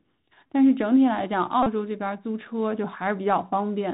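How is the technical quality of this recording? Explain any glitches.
The recording has poor technical quality. It carries narrowband headset-codec coloration throughout and two brief dropouts patched by repetition.

Bluetooth CVSD headset codec, throughout: The speech passes through the narrowband headset path, where each sample is coded as a single up-or-down bit at 64 kbps and the step size adapts to follow the waveform. Nothing above about 4 kHz survives, so the speech sounds boxed-in and dull. Sibilants come out scratchy because the step cannot keep up with fast high-frequency movement, and a grainy hiss sits under the speech. The damage is plainly audible.

Bluetooth headset packet repeated, at 0.47 s and from 1.63 to 1.67 s: In both places audio between headset and phone went missing, and the decoder replayed the previous packet's bits to fill the gap. The first gap lasts 15 ms, which fits four repeated 3.75 ms packets, and it sounds like a very short buzz. 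The second lasts about 34 ms, roughly nine packets. Because the same packet repeats every 3.75 ms, it becomes a brief buzz near 267 Hz before clean audio resumes.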